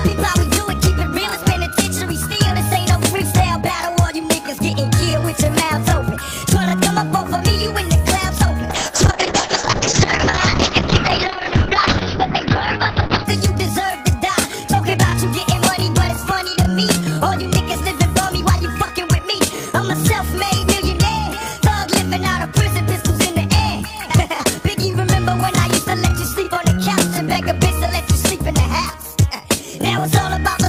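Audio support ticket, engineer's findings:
Call bitrate drop, 8.71–13.31 s. Symptom: sound turns rough and watery, top end muffled. Component: encoder under rate control. Mechanism: bandwidth estimate fell, bitrate cut from 64 to 6 kbps, audio bandwidth narrowed from 20 kHz to 6 kHz, bottom held about 4.5 s. Distinguishing: continuous coarse coding without gaps or clicks, unlike packet loss. Recovers to full band afterward.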